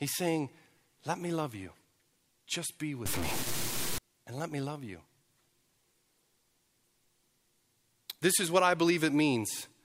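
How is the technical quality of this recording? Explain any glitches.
One glitch affects the recording. From 3.06 to 3.98 s, just before "and let me love", the speech turns harsh and buzzy, and a gritty noise floor fills the quieter moments. This is likely a stuck bit, where one data line in the converter or signal path holds a fixed value. Roughly half the samples are then pushed off by a step of about -30 dBFS. The error flips with the waveform's sign near zero, so even soft passages carry noise.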